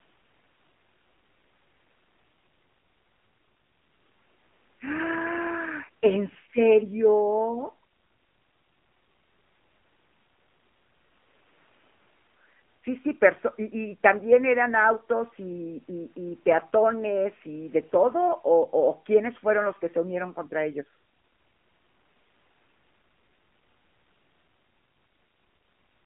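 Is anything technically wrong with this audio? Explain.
Yes, the whole clip has gone through an AMR narrowband mobile codec, the AMR-NB speech coder used on 2G and 3G calls. The speech is squeezed into a phone-line band of roughly 200 Hz to 3.4 kHz, and nothing survives above 3.6 kHz. The coder models the vocal tract and excites it with a few pulses per frame. The damage is plainly audible: a thin, buzzy, synthetic quality that fits one of the lower modes, around 7.4 kbps.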